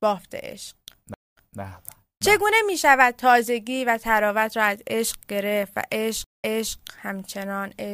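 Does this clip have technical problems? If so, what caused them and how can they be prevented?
Yes. There are two stream reconnects in this speech. At 1.14 s the audio drops out for about 0.23 s, then resumes roughly 0.23 s earlier, so a short stretch repeats. At 6.24 s it goes silent for about 0.19 s and comes back about 0.33 s earlier, recovering by 6.75 s. Each time the connection failed and the player reconnected. It restarted decoding mid-stream from a resent burst. A larger receive buffer with resume-from-offset logic would prevent both.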